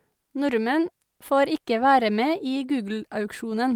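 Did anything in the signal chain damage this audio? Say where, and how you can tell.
No, nothing in the signal chain damaged this audio.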